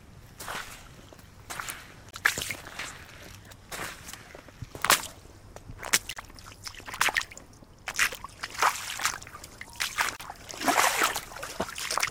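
At 2.11, 6.13 and 10.16 s there's a gap at a join of encoded pieces, about 25, 32 and 32 ms, every 4 s. Untrimmed encoder delay and end padding leave brief silences.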